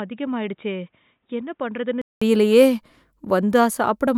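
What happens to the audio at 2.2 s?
At 2.2 s the input switched to a poorer device ends. From the start to 2.2 s the speech is band-limited, with nothing above 3.8 kHz, so it sounds dull and boxy. It is also about 10 dB quieter and carries a different background noise, roughly 50 dB below the signal. The likely cause is a lower-grade microphone or headset call profile, with the system changing back to the fuller input here. A 200 ms silence marks the switch, after which the speech opens up again.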